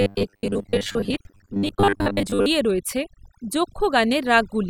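Overdone noise removal runs through the whole clip: a noise reduction stage set far too aggressively cuts individual frequency bands whenever they sit close to its noise estimate, taking quiet parts of the speech with them, so the background drops and breaks up into twinkling specks.

From 0.01 to 2.46 s there is robotic sound from repeated short buffers. Audio was likely arriving too seldom, so the playback filled gaps by looping the last stretch, about half the time, which fits a 10 ms buffer. The result is a rigid, metallic 100 Hz buzz that only loosely tracks the speech.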